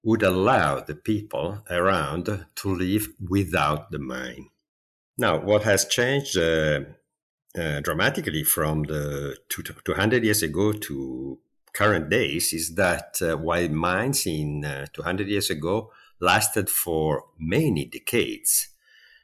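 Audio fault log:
Nothing stood out on listening to this speech recording.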